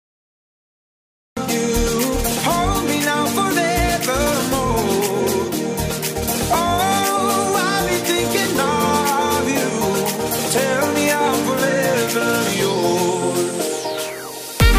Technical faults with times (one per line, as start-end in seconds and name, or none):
0.00-1.37 cut-off start